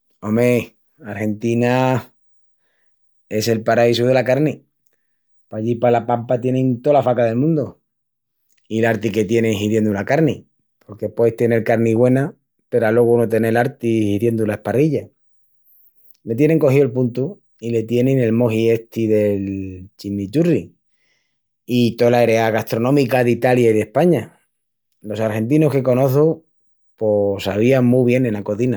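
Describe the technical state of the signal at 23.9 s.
At 23.9 s the speech carries a grainy, breathy edge, and this damage is plainly audible. It is not a momentary event: it runs through the whole clip. The likely cause is Bluetooth LC3 compression, whose transform coding in 10 ms frames discards fine upper-spectrum detail and fills the gaps with synthetic noise. The character fits a rate around 48 kbps, and nothing remains above about 20.2 kHz.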